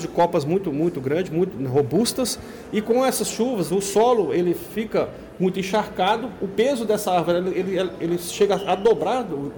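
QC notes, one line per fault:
0.19–0.36 s, 1.77–2.09 s, 3.97–4.20 s, 5.75–6.11 s, 8.41–8.92 s: hard clipping. The signal exceeded what a stage could pass, by about 6 dB in the first burst, about 4 dB in the last and about 3 dB in the others. Peaks were sliced flat, and those squared tops add high harmonics, heard as short bursts of harsh, crackly fuzz on the loudest moments.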